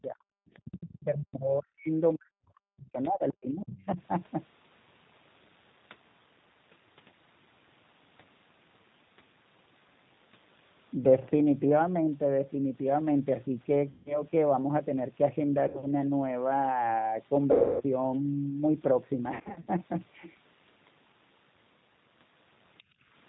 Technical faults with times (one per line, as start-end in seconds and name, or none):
0.00-23.29 G.729 codec
0.02-0.30 speech suppressed in double talk
0.54-1.03 other side's voice leaking through
0.64-3.99 speech suppressed in double talk
3.03-3.34 other side's voice leaking through
3.81-3.85 other side's voice leaking through
13.90-14.22 VoIP packet loss concealed by the speech codec
15.68-15.85 VoIP packet loss concealed by the speech codec
17.52-17.83 VoIP packet loss concealed by the speech codec
19.34-19.68 VoIP packet loss concealed by the speech codec
22.78-22.83 other side's voice leaking through
22.83-23.08 background gated by the echo canceller